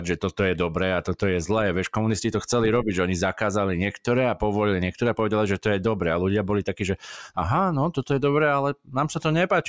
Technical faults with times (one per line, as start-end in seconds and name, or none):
none